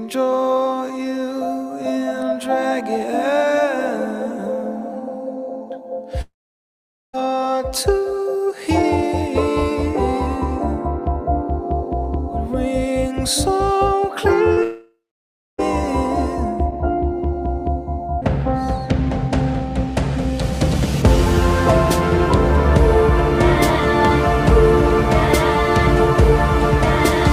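The audio has two gaps that sound like a long network dropout, most likely from lost packets. From 6.21 to 7.15 s the last sound is carried on briefly, fading as a buzz or hiss, then about 0.82 s of silence or low steady noise, with roughly 0.92 s of audio lost. The same happens from 14.63 to 15.60 s, where about 0.96 s goes missing and about 0.62 s ends up silent. Just before that second one, from 14.53 to 14.59 s, there's a short concealed packet loss: about 40 ms never arrived, so the receiver patched it by extending the previous sound and blending back, which comes across as a quick smear or wobble.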